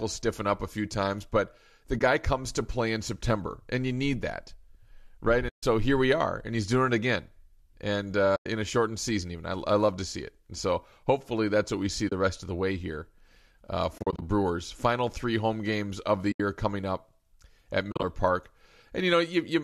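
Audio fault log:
1.99 to 18.04 s, AAC frame loss with muting: stretches of coded audio never reached the decoder, which zeroed them. The gaps are at 1.99–2.01 s (between "few times but the" and "comes to play in"), 5.49–5.63 s, 8.36–8.46 s, 12.09–12.12 s (between "that's what we see" and "rest of the way"), 13.98–14.22 s (just after "the way here uh"), 16.32–16.40 s and 17.92–18.04 s. Lengths of 20 to 140 ms fit the 10 ms frames of a low-delay AAC link, likely AAC-ELD at 64 kbps. The overlapping windows fade each hole in and out softly. At 13.98 s and 17.92 s the losses come in runs of up to roughly 40 ms.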